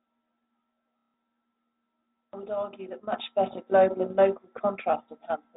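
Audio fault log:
0.99–1.14 s: packet loss with last packet repeated. A 150 ms stretch is filled by replaying the same short chunk, which fits five lost 30 ms packets. The run buzzes near 33 Hz. The spectrogram shows identical repeated slices.
3.12 s to end: sudden gain jump. Right after "I would argue that", the speech and background noise rise together by about 12 dB with no ramp, likely from a gain change applied in a single step. The waveform envelope steps up abruptly, and the spectrogram brightens at all frequencies.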